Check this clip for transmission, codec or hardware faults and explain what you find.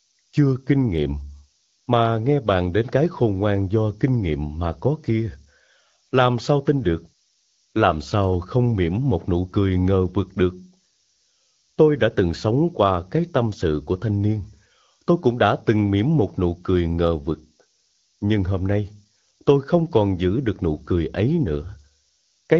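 One fault runs through the whole clip. A steady, thin hiss sits roughly 20 dB below the speech and rises sharply toward the top of the band. This is low bit depth with noise shaping. It fits an 8-bit signal whose rounding error is fed back and pushed up into the high frequencies. The AMR-WB coding underneath shows only light damage.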